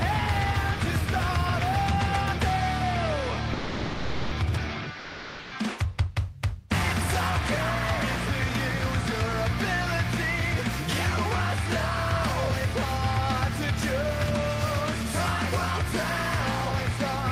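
At 3.53 s the sound cuts out and is replaced by steady noise or near silence for about 0.78 s, coming back at 4.31 s. It happens again from 4.99 s to 5.51 s, a gap of about 0.52 s. Both look like sound dropped by the voice detector. The sender likely mistook real content for background and stopped transmitting, which fits Opus discontinuous transmission, with comfort noise filling in until the detector triggered again.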